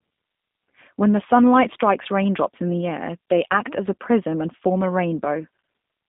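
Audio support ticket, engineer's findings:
G.729 codec artefacts throughout speech, plainly audible: rough, slightly synthetic texture. Mechanism: 8 kbit/s rebuild from vocal tract filter, pitch predictor, sparse pulses per 10 ms frame. Spectrogram: hard ceiling near 3.8 kHz, line band roughly 150 Hz to 3.7 kHz.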